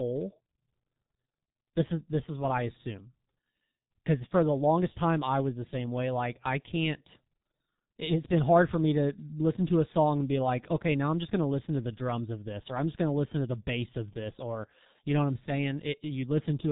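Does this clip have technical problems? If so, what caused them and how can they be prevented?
Yes. The speech is muffled and hoarse throughout, with smeared consonants. This is G.723.1 codec damage. Nothing above 3.8 kHz survives. The coarse 30 ms frames and slow voice-model updates fit a rate near 6 kbit/s. Prevent it by using a wideband codec at higher bitrate.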